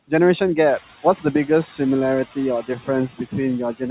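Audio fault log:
Throughout: noise suppressor artifacts. The background is pushed down by about 9 dB between phrases, then lifts again under the speech. The suppressor judges each frequency band frame by frame and lowers whatever it reads as steady noise. The room noise that swells around half a second in gets the same treatment, so the effect is clearest from there on.
2.62–2.89 s and 3.13–3.35 s: speech cut by the noise suppressor. In both spans, parts of the speech sink with the background. The deepest dip is about 16 dB. Around a fifth of a second is lost in the first span and about a tenth in the second. Quiet speech energy looked like noise to the suppressor, so it was turned down too. Endings and soft sounds come out swallowed and faint. Everything above 4 kHz is gone in both spans, as it is across the clip, which fits a G.711 call path.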